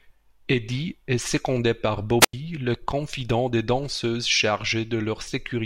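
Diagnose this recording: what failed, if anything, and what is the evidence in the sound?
What failed is the radio link: a wireless microphone squelch dropout at 2.20 to 2.33 s. The RF signal fades, hiss swells briefly, then the receiver's squelch mutes the output for about 89 ms before the speech comes back. That's a transmission fault, not a recording one.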